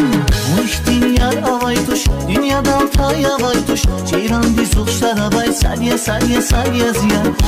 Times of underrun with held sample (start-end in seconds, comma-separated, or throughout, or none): none